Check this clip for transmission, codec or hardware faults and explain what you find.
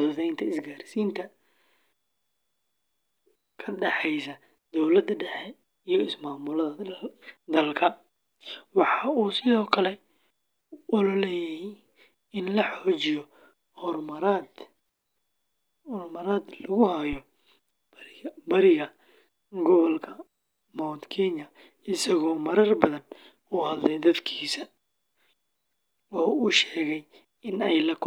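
One hardware fault is present: a phantom power thump from 17.13 to 17.19 s. A supply on the live microphone input was switched, and the sudden voltage step passed through the coupling capacitors into the signal path. In the speech this is a short, deep thump that peaks at about -25 dBFS and dies away in roughly 14 ms, so it sounds like a dull knock.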